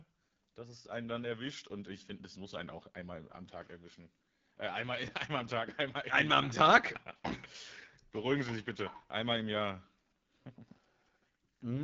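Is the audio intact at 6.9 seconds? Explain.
No, 6.9 s falls within AMR wideband (HD Voice) codec damage spanning the whole speech clip. Rough, raspy detail fits its 8.85 kbit/s mode, which models speech below 6.4 kHz and fills upward with shaped noise. A spectrogram shows that hazy band and nothing above 7.5 kHz.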